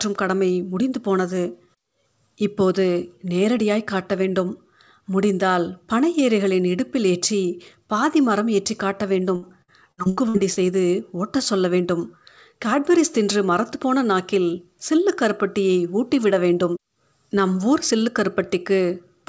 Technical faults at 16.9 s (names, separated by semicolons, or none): none